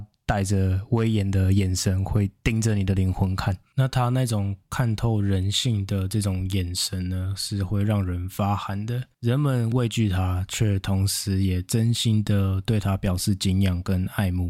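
Nothing in this speech recording sounds wrong at any point, so there's no fault to walk through.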